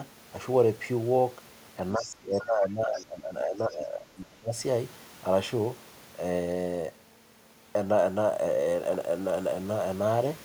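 From 1.96 to 4.53 s the talker's speech is pulled down, dropping by roughly 20 dB at its deepest and thinning or breaking up for about two seconds in total. This is speech suppressed in double talk, likely because the echo canceller could not separate the talker from loudspeaker echo and attenuated both together. Inside that stretch, from 1.97 to 2.04 s and again from 2.95 to 3.06 s, brief scraps of a second voice come through at roughly 20 dB below the talker. This is the other side's voice leaking through, likely residual loudspeaker echo the canceller failed to remove from the microphone signal.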